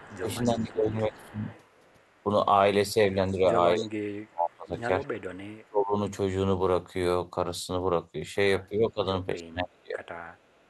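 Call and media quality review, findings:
Speech suppressed in double talk: 0.0–1.46 s, 2.24–2.29 s, 2.94–5.06 s, 5.66–5.96 s, 8.69–10.01 s. Likely echo canceller misjudging near talker as loudspeaker echo while both sides speak and attenuating it. Voice dips by roughly 15 dB, 5 dB, 35 dB, 25 dB and 30 dB respectively.

Echo leak: 0.0–2.23 s, 5.53–5.66 s, 10.05 s to end. Likely loudspeaker-side echo canceller leaving residual pickup, returned to talker. Faint delayed copy of voice 291 ms behind, about 25 dB down at start, about 40 dB down later.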